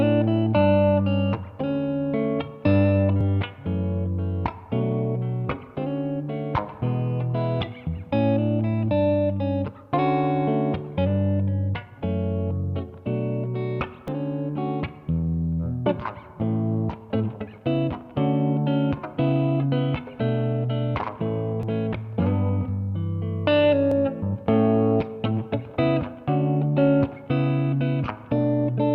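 Dropped buffers (overrun) are the likely cause of three sudden skips, at 14.08 s, 21.63 s and 23.92 s. At each point the sound jumps straight ahead with no gap of silence, as if a short stretch had been cut out and the two ends butted together. Roughly 20 ms goes missing at the first two, and about twice that, around 40 ms, at the third. That pattern fits samples being overwritten before the software could read them.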